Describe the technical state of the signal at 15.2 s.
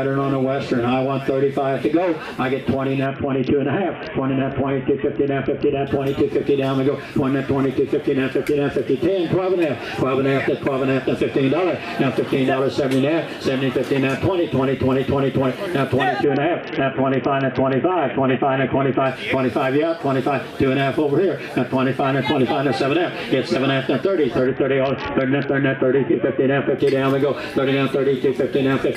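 At 15.2 s the signal is intact, with no audible fault at that moment.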